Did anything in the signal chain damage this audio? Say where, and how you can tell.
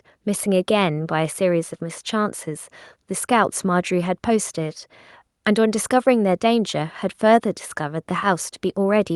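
No, nothing damaged this audio.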